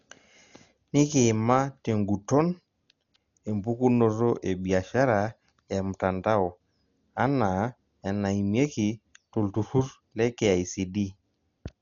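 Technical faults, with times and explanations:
Throughout, Dolby Digital compression: speech is dull, nothing above 7 kHz, with rough, fluttering noise filling starved bands, unlike a clean low-pass; likely a bitrate near 40 kbps.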